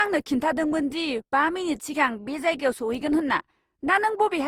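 Throughout, the speech sounds swirly, smeared and hollow. Attacks blur. This is likely generation loss, from about five lossy passes fitting Opus at 48 kbit/s.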